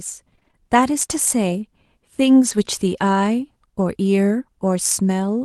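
From 0.35 to 0.55 s the speech breaks up with repeated packet loss, giving a robotic sound. Five short holes fall within those 0.2 s, the longest 28 ms. Each is filled by stretching the last decoded sound forward, and about half of the span is made of that concealment. The result is choppy, with fragments of the speech missing rather than cleanly silent.

At 2.45 to 2.51 s a lost packet is rebuilt from error correction. Around 40 ms are played back from the low-bitrate copy that Opus carries in the following packet, which points to two separate packets lost. There is no gap at this point, but the rebuilt frames sound rougher and grainier than the audio around them. The call path is Opus, with content stopping near 12 kHz, which fits a bitrate of about 32 kbps.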